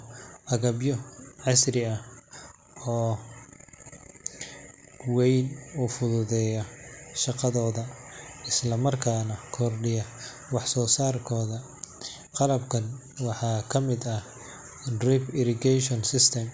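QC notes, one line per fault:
No faults found in this speech recording.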